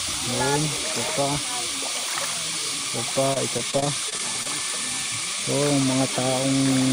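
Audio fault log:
3.33–4.46 s repeated packet loss (robotic sound). Nine short gaps, the longest 24 ms, are filled by stretching earlier sound, leaving a choppy, robotic texture.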